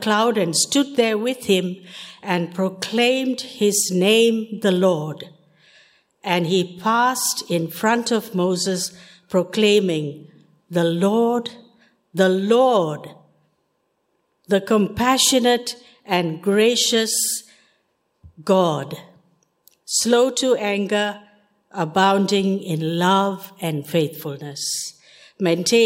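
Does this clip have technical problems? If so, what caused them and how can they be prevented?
No, the signal holds steady throughout, with no dropouts, glitches or other technical faults to trace back to a cause or guard against.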